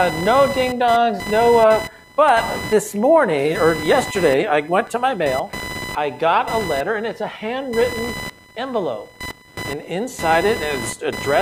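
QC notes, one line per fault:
throughout, computer activity noise: a chirping buzz pulsing at around 1 kHz sits roughly 15 dB under the sound, tracking the computer's load through the shared ground rather than the audio. On a spectrogram it shows as a line near 1 kHz with harmonics above.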